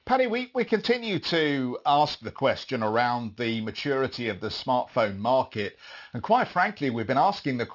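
Speech with aliasing throughout. Sibilants turn gritty and metallic as energy above 6 kHz folds back. This fits a drop to a 12 kHz rate without filtering first.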